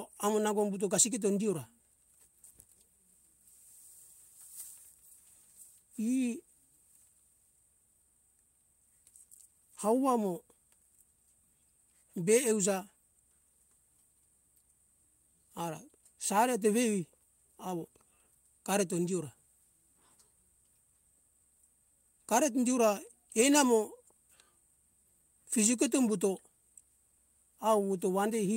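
At 23.41 to 23.43 s there is a lost packet rebuilt from error correction. The 20 ms stretch, which fits a single lost packet, was played from the low-bitrate copy in the next packet, so it sounds briefly rough and noisy rather than silent or smeared like a concealment guess.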